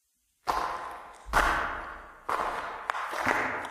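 From 1.9 s to 3.31 s there is a call bitrate drop. The call's bandwidth estimate fell, so the encoder got far fewer bits. The sound turns coarse, watery and muffled, with highs cut away, fitting a fall from 64 to 21 kbps.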